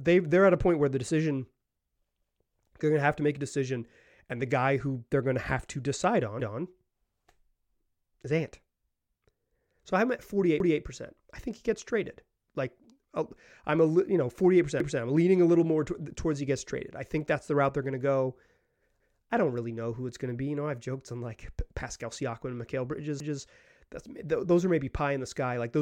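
Overlapping chunks cause stutters at 6.40, 10.60, 14.80, 19.00 and 23.20 s. The speech was handled in 4 s chunks. Each one started 200 ms before the previous one ended. So 200 ms of speech plays twice at every join, heard as a brief repeated stutter.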